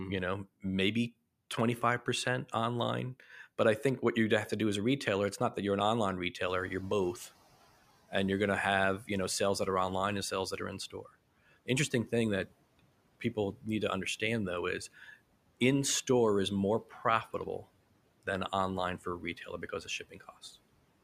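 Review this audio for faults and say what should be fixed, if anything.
Noise suppressor catching up, 6.46 to 7.24 s. The room noise jumps by about 17 dB around 6.5 s. The suppressor's noise estimate lags, so the noise passes through with little reduction and then sinks by about 12 dB over 780 ms. On a spectrogram the broadband noise floor brightens abruptly and fades over that span. The waveform shows a thicker noise envelope that tapers down. A faster-tracking noise estimator, or quicker adaptation on sudden level rises, would shorten this.

Speech cut by the noise suppressor, at 10.9 to 11.08 s, 19.01 to 19.63 s and 19.84 to 20.31 s. The suppressor treats brief speech as noise and pulls it down by about 12, 8 and 13 dB. In total that is roughly a tenth, a tenth and a fifth of a second, so parts of the speech sound swallowed or faint. A spectrogram shows notches in the speech energy. 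The waveform shows short dips in the speech envelope. Less aggressive gain floors and better speech-presence detection would keep soft speech intact.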